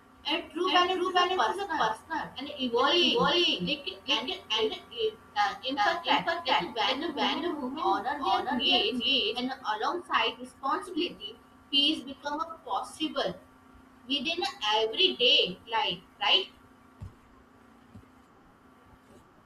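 A speech recording with a doubled audio track from 0.65 s to 9.39 s: a second full-band copy of the same speech trails the original by roughly 0.4 s at about the same loudness, then drops out abruptly at 9.39 s. The likely cause is the signal being captured twice, once through a slower path. Unlike room echo or reverb, the copy repeats only once, with no decay, no added room colour, and hard start and stop edges.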